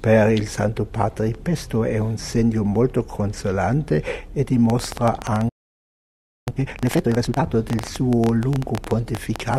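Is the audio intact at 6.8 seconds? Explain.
No. At 6.8 s two faults overlap. A train of clicks runs from 4.7 s to the end of the clip, at about 11 clicks per second with uneven spacing. The pulses have much the same shape and stand well above the signal, roughly 15 dB, so they are heard as a steady irregular ticking over the sound. The cause is likely interference from nearby equipment or a faulty connection or power supply injecting repeated pulses into the path.

The moment also falls inside a time-compressed catch-up from 6.48 s to 7.44 s. After a stall, the player shortened its backlog by dropping small segments and cross-fading the remainder, so this stretch plays at 2.0 times normal speed while keeping its original pitch. The result is a hurried passage, where material is skipped and not just delayed.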